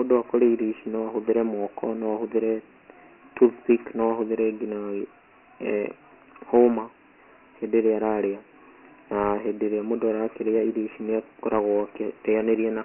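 Dialogic VOX ADPCM damage runs throughout this speech recording: 4-bit ADPCM, consistent with about 24 kbps at 6,000 samples a second, removes everything above 3 kHz and adds a heavy gritty hiss that follows the speech.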